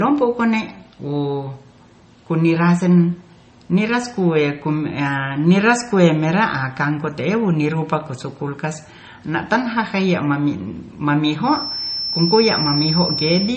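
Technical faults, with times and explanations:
Throughout: transcoding between lossy codecs; nothing above 8.4 kHz survives, and smeared low-rate artefacts sit under a second codec's texture, likely MP3 at 32 kbit/s re-encoded to WMA at 96 kbit/s.
11.40–13.57 s: feedback whistle; a thin, single-pitch 5.4 kHz tone, only slightly below the speech level, rings behind the sound, swelling and fading slowly, likely a loudspeaker-to-microphone loop held at the edge of feedback.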